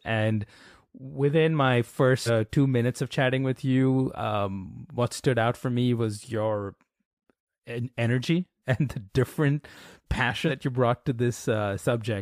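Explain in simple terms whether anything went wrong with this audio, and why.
Compressed frames skipped: chunks of the compressed file were missing or rejected, so playback jumps ahead. At 2.25–2.30 s, between "within my" and "two minutes of chatting", about a third of a second vanishes; at 10.47–10.51 s, about a tenth.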